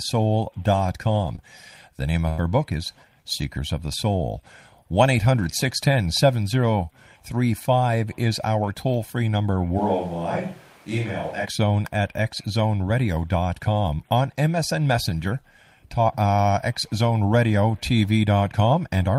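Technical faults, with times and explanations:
1.35–1.39 s, short concealed packet loss: about 20 ms of the speech arrived too late to decode. The receiver covered it by extending the preceding sound for 15 ms before rejoining the real signal, leaving a brief smear.
2.29–2.40 s, burst of packet loss: a longer run of lost audio just before "book is". The decoder stretched the last sound for 89 ms while fading it. Then 80 ms of speech were skipped as playback jumped ahead.
9.80–11.44 s, switch to a distant microphone: right after "our toll free number" the voice abruptly turns hollow and roomy, thinner in the bass and about 5 dB quieter, with background noise rising to roughly 25 dB under the speech. This is likely the close microphone dropping out and a farther one taking over, before the sound snaps back.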